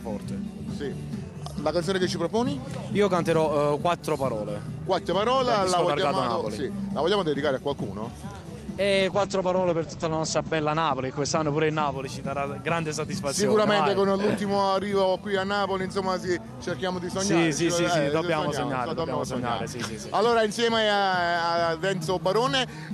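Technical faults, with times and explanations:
9.0–11.99 s, call bitrate drop: the bandwidth estimate collapsed and the encoder was forced to spend far fewer bits, consistent with a fall from around 64 to 12 kbps. Coarser coding makes the sound rough and watery, and the audio band narrows from 20 kHz to 8 kHz, muffling it for about 1.7 s at its worst before recovering.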